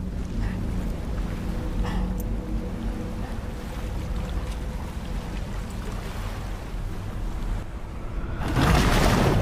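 From 7.63 to 8.56 s the level drops abruptly by about 6 dB, then snaps back. This is likely one channel dropping out before the mono sum. Shared content halves, and anything present only in that channel vanishes, which a plain gain dip wouldn't do.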